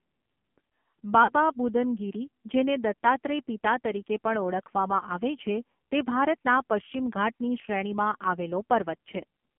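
From start to finish the speech carries the sound of the AMR narrowband mobile codec. The band is cut to roughly 200 Hz to 3.4 kHz. Nothing above 4 kHz survives. The codec rebuilds the voice from a vocal tract model fed by a few pulses per subframe. At this low bit budget that model is crude. The damage is heavy. Voices sound buzzy and synthetic, which fits a low AMR mode near 5.9 kbps.

At 1.24 s there are lost AMR speech frames, lasting until 1.33 s. The gap of about 40 ms points to two 20 ms frames failing their checks. The decoder filled it by repeating the last good pitch and vocal tract settings with falling gain. The sound smears and dips briefly instead of cutting out. It then returns weak or rough for a moment.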